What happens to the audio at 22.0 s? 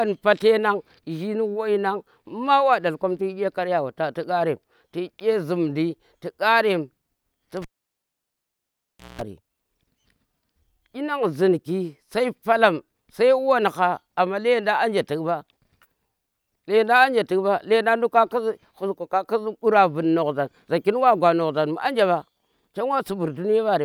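Nothing goes wrong at 22.0 s; the speech carries on intact through that moment, with no dropout, click or distortion to be heard.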